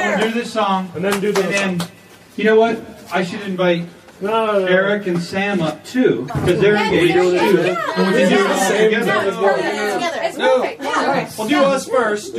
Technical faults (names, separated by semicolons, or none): MP3 compression; damaged data in a compressed stream